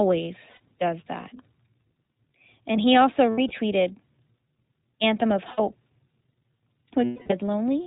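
Speech coded with the iLBC codec: nothing above about 4 kHz survives, and the voice has a plainly audible rough, slightly synthetic edge, which fits iLBC's 15.2 kbps mode with 20 ms frames. It differs from plain low-bitrate band-limiting because the graininess comes from each frame's excitation being coded independently. Lost iLBC frames cause brief held, buzzy vowel sounds at 0.50–0.61 s just before "does that", 3.30–3.51 s just after "he also" (several short losses, none much over a tenth of a second), 5.52–5.60 s, and 7.04–7.33 s, the longest and most faded. They are not silent dropouts, because the decoder repeats the last pitch cycle mixed with noise, and the voice recovers immediately afterwards since iLBC frames don't depend on earlier ones.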